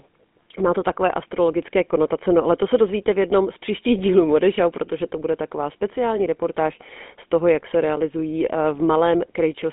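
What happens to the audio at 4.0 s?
At 4.0 s the speech carries GSM full-rate codec damage, present throughout the clip. The vocal tract is rebuilt from a coarse, regularly pulsed excitation, giving a plainly audible buzzy, gravelly roughness that fits a 13 kbps phone codec, with the band held near 200 Hz to 3.6 kHz and nothing above 3.8 kHz.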